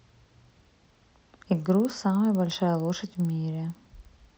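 A sample-rate converter that restarted on every block runs through the whole of this speech recording. Each 50 ms block was resampled in isolation, with the step sounding like an upsample from 16 kHz to 48 kHz, so the filter had no real neighbouring samples at the block boundaries and left a small error at each one. Those errors surface as a steady ticking at 20 per second, laid over the speech wherever it is sounding.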